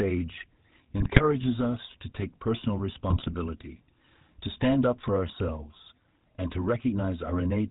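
A buzzy, gravelly roughness colours the speech from start to finish, with nothing audible above 4 kHz. That is the GSM full-rate codec, which fits a 13 kbps stream: it rebuilds the voice from a vocal-tract model driven by regular pulses, keeping only a third of the excitation.

From 1.00 to 1.21 s, just before "us to take personal", the voice breaks into squawks and gargling, and again from 3.08 to 3.33 s, right after those words. These are GSM bit errors: corrupted filter, pitch and gain values warped the spectrum and level over ten frames the first time and twelve the second.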